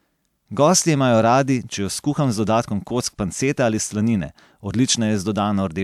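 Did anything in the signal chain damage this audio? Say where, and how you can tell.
No, nothing in the chain left an audible mark on this speech recording; there's no point in it where any stage can be heard to have damaged the signal.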